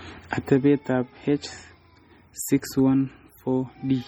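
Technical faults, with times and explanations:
Throughout: MP3 compression, heavy damage. The speech sounds watery and swirling, with metallic chirps on s sounds and smeared consonant onsets. This is likely an MP3 encoding at a rate that fits about 32 kbps. The encoder zeroes weak frequency lines that then flicker on and off between frames. On a spectrogram that shows as scattered, blotchy time-frequency holes and isolated bright specks, with a hard cut-off at 20.7 kHz and nothing above it.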